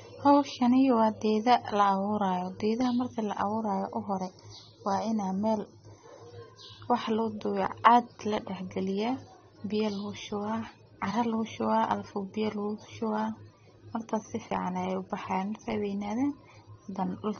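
Speech, dull and smeared throughout, with nothing above 6.3 kHz and plainly audible warbling. This is likely AAC compression at a low bitrate, near 24 kbps. After "marki la", from 3.41 to 6.26 s, the sound turns hollow and phasey. This is channel delay (comb filtering): one channel lags by a fraction of a millisecond before the mono sum, notching near 3 kHz.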